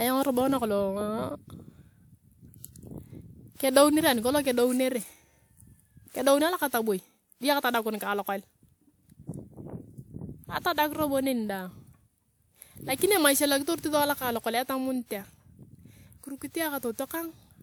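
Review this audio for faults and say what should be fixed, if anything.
Across the whole speech recording the sound has a swirly, hollow, smeared quality, with consonant attacks blurred, worse than a single lossy encode would leave. This is generation loss, likely from the audio being decoded and re-encoded around five times. Each pass quantised the signal again on a shifted frame grid, so the noise and spectral holes piled up. Nothing remains above about 20.1 kHz, and the character fits a WMA chain at 128 kbit/s. To prevent this, keep the working copy lossless and encode to a lossy format only once, at final delivery.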